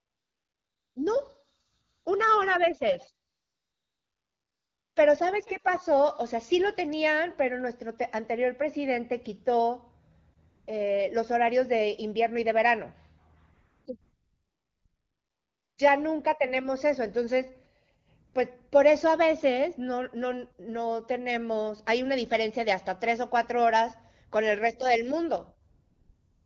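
AMR comfort noise fills the pauses at 0.00–0.95, 1.91–2.05, 3.29–4.95, 10.49–10.67, 13.53–13.85, 14.01–15.77, 18.27–18.33 and 25.71–26.45 s. Speech frames stopped, so the receiver synthesised a smooth, steady hiss. It switches in and out, replacing the real background, over light AMR-WB coding.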